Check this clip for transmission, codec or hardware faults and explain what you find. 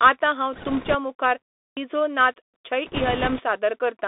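Three kinds of fault are audible across the speech.

Bluetooth CVSD headset codec, throughout: the sound is held to roughly 250 Hz to 3.6 kHz, which fits a 64 kbps CVSD stream. Its one-bit adaptive step can't keep up, so sibilants go scratchy over a grainy hiss.

Bit errors on a Bluetooth voice link, 0.53 to 0.96 s and 2.87 to 3.43 s: there's a rushing crackle at what sounds like around 4 percent bit errors, without sharp clicks, because each flipped bit only nudges the signal slightly.

Clipped start after a pause, 1.67 to 1.77 s: after a 0.3 s gap, about 99 ms of onset vanishes while the output wakes up, so the speech jumps in abruptly.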